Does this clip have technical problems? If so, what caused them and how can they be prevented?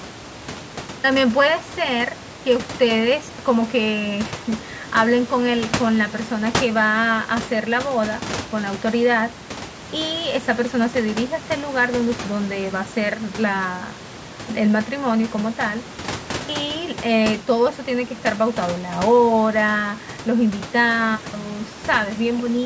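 No, nothing stood out on listening to this speech clip that would point to a technical problem, so there is nothing to trace back or prevent.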